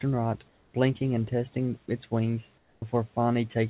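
From 0.48 to 0.74 s the real background gives way to steady, featureless comfort noise about 4 dB quieter, likely from discontinuous transmission; unlike a dropout, no speech is lost. At 1.86 s a 10 ms scrap of speech vanishes into a brief burst of steady noise: sound dropped by the voice detector, which likely took it for background, so actual speech goes missing rather than just the background changing. From 2.58 to 2.82 s comfort noise again replaces the background, about 8 dB quieter, likely for the same reason. At 2.8 s the speech starts abruptly with its first 20 ms cut: an onset clipped by the voice detector, likely slow to register the returning sound. This differs from a mid-sound drop in that only the soft beginning is missing. Throughout, the call path band-limits everything to 4 kHz.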